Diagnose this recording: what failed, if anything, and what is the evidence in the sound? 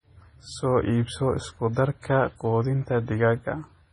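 The trouble sits at the codec stage, and it runs the whole way through. The speech has that watery, swirly texture, with s sounds going chirpy and metallic and consonant attacks smeared, and nothing at all comes through above about 10.4 kHz. That hard treble ceiling plus heavy damage points to MP3 compression at a starved bitrate, likely something near 24 kbps. Short of bits, the encoder lops off the top end and drops weak frequency lines that flicker frame to frame.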